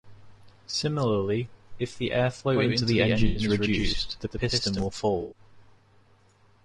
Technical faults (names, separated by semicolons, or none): low-delay AAC compression; AAC frame loss with concealment; doubled audio track